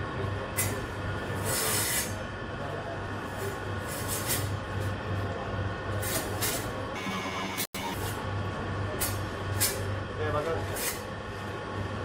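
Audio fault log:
6.96–7.96 s, planar audio read as interleaved: 21.3 ms blocks play twice at double speed, an octave up with 46.9 Hz flutter; spectrogram harmonics double.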